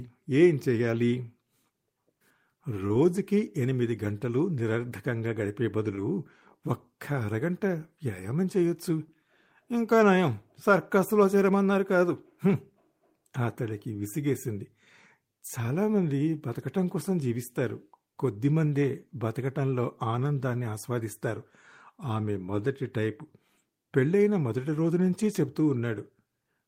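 At about 5.95 s the speech briefly smears, a short wobble lasting roughly 40 ms where a tiny piece of sound seems to slur or drop. This is short concealed packet loss: about 20 ms of audio arrived too late, and the receiver bridged the gap by extending the preceding sound before blending back in.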